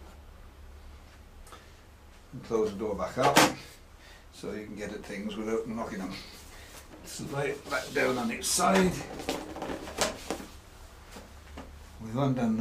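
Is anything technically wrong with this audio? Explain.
No, nothing technically wrong can be heard in this audio; the signal plays through without any audible disruption or damage.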